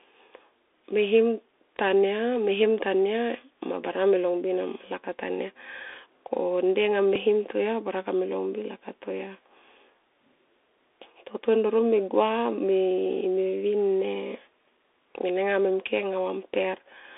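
Bluetooth CVSD headset codec, throughout: the speech has been squeezed through the narrowband headset link, which reduces the signal to a stream of single up-or-down bits with an adapting step size, which fits a 64 kbps stream. The audible band sits between about 300 Hz and 3.6 kHz, so the speech sounds thin and boxed-in. The damage is plainly audible as a granular hiss beneath the speech, scratchy s sounds, and roughness where loud high-frequency energy outruns the step size.

Bluetooth headset packet repeated, at 7.16 s: a short stretch of about 3.8 ms, which sounds like a single lost packet between headset and phone. The chip filled the gap by decoding the previous packet's bits a second time. Because it happens only once rather than in a run, it does not build into a buzz. It comes through as a brief, small tick in the speech.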